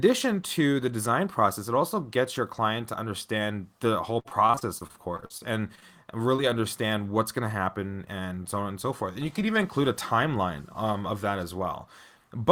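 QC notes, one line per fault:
4.19–5.84 s, repeated packet loss (robotic sound): 15 separate gaps over this 1.6 s stretch, the longest 53 ms, with about 220 ms of audio missing and 371 ms synthesised to cover it, roughly a quarter of the span. Each hole is bridged by extending the preceding speech, and the next drop arrives before the decoder fully recovers. The repeated looping of the last pitch period gives the choppy, robotic texture.
6.36–6.40 s, short concealed packet loss: a single brief dropout with about 20 ms of speech lost and 23 ms of concealment audio generated in its place. The receiver continued the last sound, following its pitch if voiced or as shaped noise if not, then crossfaded back into real audio. At this length it registers as a small smear or wobble, and a short consonant in the gap may be lost entirely.
7.78–8.33 s, jitter buffer speed-up: playback runs at about 108% speed for roughly half a second while the receiver trims its over-full buffer, discarding around 50 ms in total as many small pitch-period-sized cuts. 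Because whole periods are removed rather than the audio being resampled, the pitch stays the same and only the pacing changes. The speech sounds hurried through this section.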